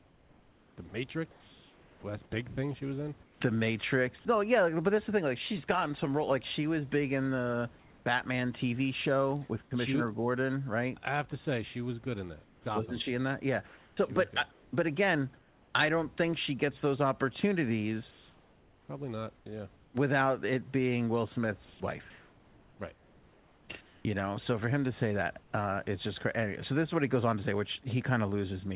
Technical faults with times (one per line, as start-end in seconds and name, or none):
0.00-3.41 sound chopped by the voice detector
7.79-8.06 comfort noise in place of the background
9.65-9.71 sound dropped by the voice detector
12.44-15.74 comfort noise in place of the background
12.63 onset clipped by the voice detector
18.11-19.94 comfort noise in place of the background
21.65-24.05 comfort noise in place of the background
25.40-25.52 comfort noise in place of the background